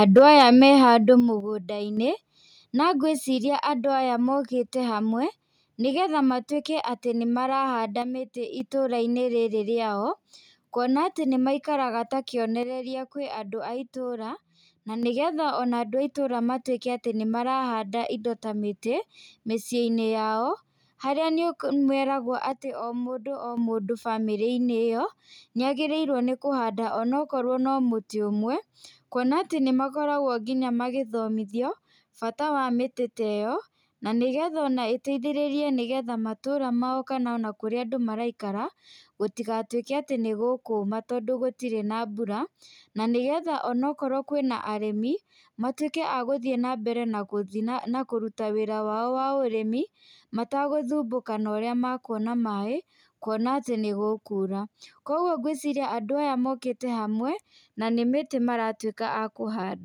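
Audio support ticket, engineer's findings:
Microphone overload, 0.16–0.43 s: harsh crackle on the loudest peaks, about 2 dB over full scale, with a few percent of samples clipped. The likely cause is mic input gain set too high, so the converter flattens the tops. The waveform shows squared-off peaks. The spectrogram shows broadband vertical smears.

Microphone volume stepped down, 0.19 s (about 3 dB) and 1.2 s, right after "me handũ" (about 7 dB). Speech and background fall together in single steps. The likely cause is the call client's auto gain reacting to the clipping. The waveform envelope shows abrupt staircase drops, and the spectrogram darkens evenly across all bands.

One channel drops out at 1.40–1.97 s (after "me handũ"), 8.02–8.60 s (after "nĩgetha matwĩke atĩ nĩmarahanda"), 12.63–15.03 s and 22.52–23.57 s. Common content falls about 6 dB in the mono sum and is otherwise unchanged. 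The likely cause is an intermittent stereo channel on the capture path. The waveform shows rectangular level dips, and the spectrogram shows uniformly dimmer blocks.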